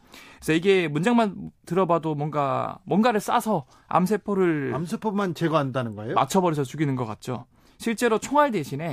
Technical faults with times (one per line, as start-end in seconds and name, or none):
none